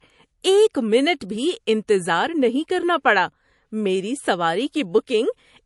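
From start to end, the speech has nothing above 11.3 kHz, so sibilants sound dull. This is low-bitrate audio saved at a high bitrate, likely a 48 kbit/s MP3 re-encoded at 320 kbit/s. The second pass cannot restore what the first removed.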